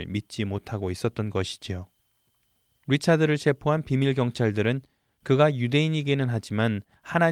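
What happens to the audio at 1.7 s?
Nothing goes wrong at 1.7 s; the speech carries on intact there, with no dropout, click or distortion at that moment.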